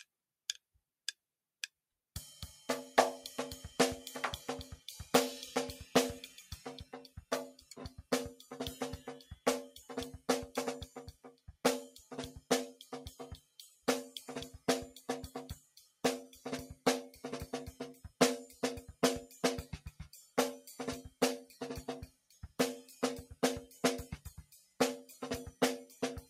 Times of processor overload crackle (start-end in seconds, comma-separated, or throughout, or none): none